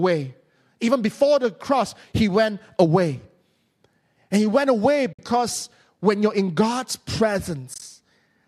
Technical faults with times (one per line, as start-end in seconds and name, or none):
5.12-5.19 AAC frame loss with muting
7.74-7.82 AAC frame loss with muting